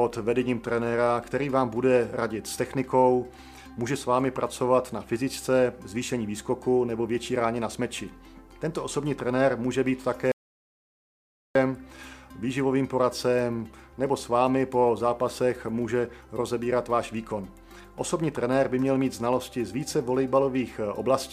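At 10.32 s the sound cuts out dead and stays out until 11.55 s, an audio dropout to silence of about 1.24 s. The gap is silent with no room tone, so the input was likely lost while recording carried on, and whatever happened there is gone.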